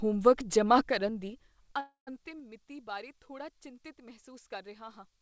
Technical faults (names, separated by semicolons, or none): call audio freeze